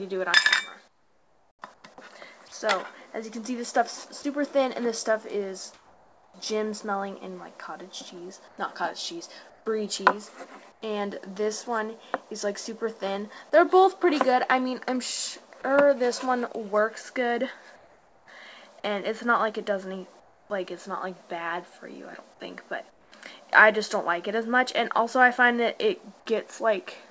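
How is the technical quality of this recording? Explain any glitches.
The recording carries the dull top of a call path, with nothing above 8 kHz, which fits a wideband codec such as G.722. It also has two kinds of glitch.

Comfort noise in place of the background occurs at 0.88–1.84 s, 5.74–6.34 s, 8.48–10.82 s, 17.76–18.28 s, 20.20–20.50 s and 22.90–23.12 s. Discontinuous transmission likely paused sending, so the receiver filled those stretches with smoother synthetic noise. Where measured, that noise sits about 5–7 dB quieter than the real background.

Sound dropped by the voice detector occurs at 4.22 s. For 20 ms the sender likely mistook sound for background, and a brief patch of comfort noise replaced it.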